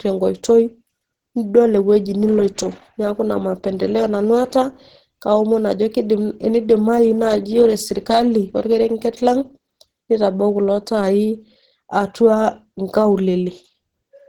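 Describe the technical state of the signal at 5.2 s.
At 5.2 s, as across the whole clip, there's audible Opus compression. The speech comes out hoarse and muffled, likely from low-rate hybrid-mode coding around 16 kbps.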